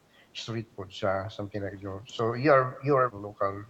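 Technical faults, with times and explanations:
0.00–0.45 s, 1.34–1.53 s and 2.01–2.13 s: speech suppressed in double talk. The speech level dips by about 5 dB across most of the opening stretch, briefly by about 5 dB around 1.4 s, then sharply by about 15 dB for roughly a tenth of a second near 2.1 s. The likely cause is an echo canceller that could not separate the talker from loudspeaker echo while both sides spoke, so it attenuated everything.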